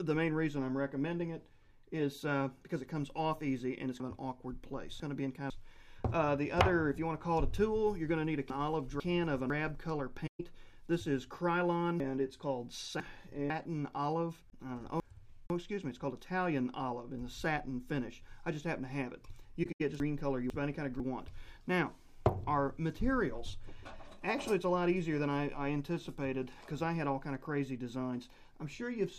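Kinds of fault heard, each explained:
Chunks out of order: half-second blocks of audio play one or two places late, so the sound jumbles briefly, five times between 4 and 21 s.
AAC frame loss with muting: missing frames get zeroed by the decoder, leaving soft-edged holes of 64 to 128 ms near 10.3, 15.5 and 19.6 s.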